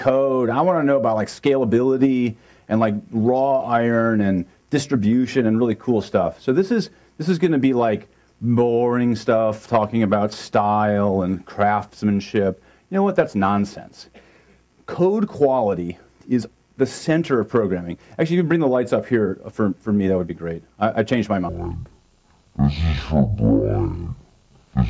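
At 21.49 s the sound suddenly drops to half speed and a full octave lower, down 12 semitones, through to the end. That's a wrong sample rate: it fits 32 kHz audio played back at 16 kHz with no conversion, so everything drags and turns heavy and low.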